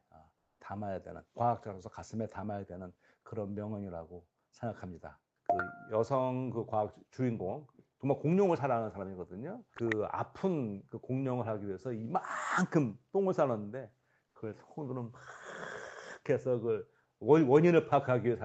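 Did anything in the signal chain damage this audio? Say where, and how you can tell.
Yes, at the codec stage there is comfort noise in place of the background, twice: from 0.37 to 0.59 s (220 ms) and from 14.27 to 14.35 s (80 ms). In both gaps the real room tone gives way to a smooth, featureless hiss that sits about 2 dB and about 1 dB lower, then the detailed background returns with the sound. The likely cause is Opus discontinuous transmission pausing and the receiver synthesising noise. Unlike a gate or dropout, the floor never falls to silence.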